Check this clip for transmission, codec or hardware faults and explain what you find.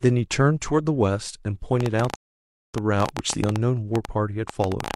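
Two faults turn up in this speech recording, and they overlap.

Train of clicks, 1.81 to 4.95 s: likely interference or a faulty connection injects about 30 similar pulses, roughly 11 per second at uneven spacing, heard as popping well above the speech.

Rebuffering stall, 2.16 to 2.74 s: the player ran out of downloaded audio and waited, so the speech drops to silence and resumes exactly where it stopped, adding 584 ms.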